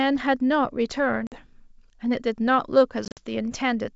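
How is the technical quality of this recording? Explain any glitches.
Two dropouts spoil the speech, both packet loss on an ADPCM call; the wideband G.722 coding carrying it sounds clean up to about 7 kHz. At 1.27 to 1.39 s roughly five packets vanish, leaving a hard 50 ms hole. At 3.05 to 3.20 s about ten go missing, 90 ms scattered over 120 ms. Each time the decoder's predictor loses sync, so the sound returns slightly distorted before settling.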